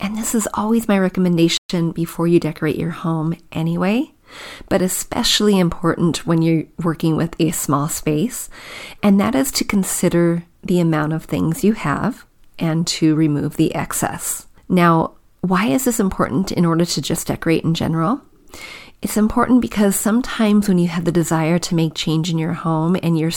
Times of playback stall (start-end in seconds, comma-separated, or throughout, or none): 1.57-1.69